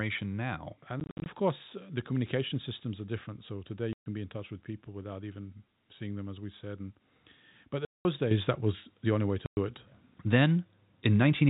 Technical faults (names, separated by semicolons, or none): packet loss filled with silence; microphone volume stepped up